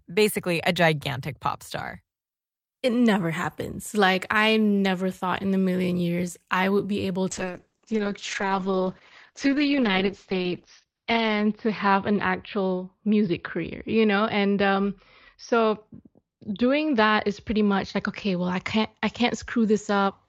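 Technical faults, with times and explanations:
7.31 s to the end, call bitrate drop: the encoder was pushed to far fewer bits, consistent with a fall from about 48 to 8 kbps. Coarser coding turns the speech rough and watery, and the audio band narrows from 20 kHz to 6 kHz, muffling it, worst for about 3.7 s.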